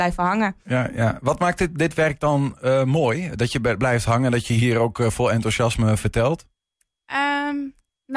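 No technical faults can be heard anywhere in this recording.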